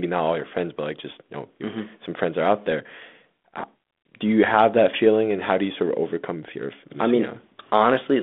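A speech recording carried over a G.726 ADPCM line at 32 kbit/s, band-limited to roughly 200 Hz to 3.5 kHz. At 4.04 s there is packet loss on the ADPCM call. About 20 ms, a couple of packets, drops out as a hard-edged silent hole. The decoder's adaptive predictor and step size then lag the sender's, so the speech resumes with brief, slight distortion before settling.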